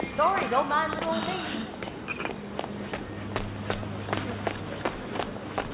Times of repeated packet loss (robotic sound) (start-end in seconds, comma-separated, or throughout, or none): none